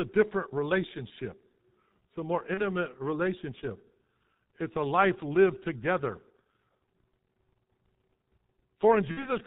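Throughout the speech, the G.723.1 codec leaves heavy damage, which fits a 6.3 kbit/s stream. Nothing passes above 4 kHz, so the voice is muffled, and its slowly updated model in 30 ms blocks makes it hoarse, with smeared consonants. A spectrogram shows a hard ceiling at 4 kHz with blank space above it and coarse, blocky harmonics below.

At 2.54 to 2.61 s, just after "it's a more", VoIP packet loss concealed by the speech codec appears. The sound points to one lost 30 ms frame. The decoder repeats its last pitch and filter, so the voice briefly freezes into a buzzy tone or coloured noise that fades. At 9.11 to 9.30 s a longer gap, consistent with two lost frames totalling 60 ms, drags into a weakening stretched sound that stays distorted after packets resume. On a spectrogram both show a frozen, unchanging pattern, and the waveform envelope dips steadily.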